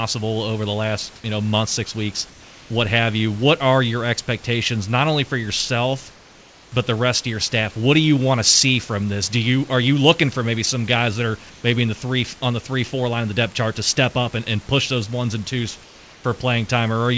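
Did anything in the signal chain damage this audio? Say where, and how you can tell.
Yes, in call processing: discontinuous transmission likely stopped the sender during pauses, and the receiver played comfort noise in place of the background at 2.3–2.7 s, 6.12–6.72 s, 11.5–11.64 s and 15.84–16.24 s. The room's background goes flat and featureless, about 1 to 3 dB quieter.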